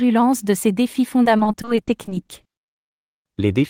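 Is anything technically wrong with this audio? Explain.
Yes. From 1.23 to 2.93 s the speech turns choppy and robotic. This is repeated packet loss: holes up to 40 ms, filling a quarter of the stretch, are patched by stretching the preceding sound.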